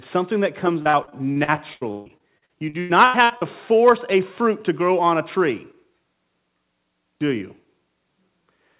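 A speech recording carried over a call link, where packets kept going missing or arriving late between 0.82 and 3.43 s. That is repeated packet loss. Nineteen holes open in that stretch, the longest about 143 ms. Each is patched by stretching the preceding sound, so roughly a third of the span is concealment. The speech turns choppy and robotic, with fragments dropped, all within a band that stops at 4 kHz, as expected from a narrowband telephone codec like G.711.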